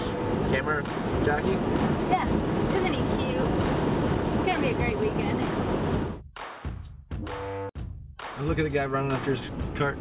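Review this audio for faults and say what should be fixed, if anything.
No faults turn up in this audio, so nothing needs to be fixed.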